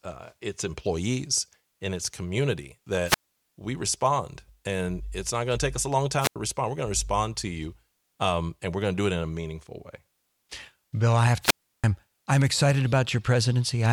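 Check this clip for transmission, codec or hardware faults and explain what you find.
The clip has three wireless microphone squelch dropouts in the speech. Each one begins with a short surge of hiss, then the sound cuts to near silence before the speech comes back. The first runs from 3.05 to 3.37 s, between "employees and its community" and "we respond and it's", with a mute of about 0.23 s. The second runs from 6.20 to 6.36 s, just after "take us a long", with a mute of about 0.09 s. The third runs from 11.41 to 11.84 s, between "I have" and "I'm excited", with a mute of about 0.33 s. In each case the radio link from the analogue FM microphone weakened and the receiver's squelch shut the output off until the signal came back.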